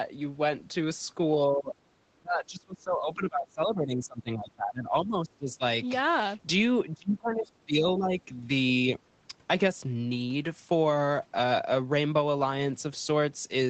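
The speech dips sharply at 1.49–1.77 s, 2.14–5.62 s, 6.94–7.49 s and 7.65–8.46 s, by about 20–25 dB (milder near 8 s), likely speech suppressed in double talk by the echo canceller.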